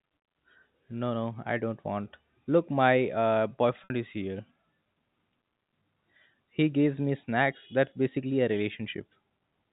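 Speech, with one fault: packet loss with pitch repetition at 3.84 to 3.90 s. About 60 ms of audio went missing, which fits three lost packets. The receiver bridged the gap by repeating the last pitch period. It sounds like a brief held, buzzy tone before speech resumes. The G.711 telephone coding limits the sound to below 4 kHz.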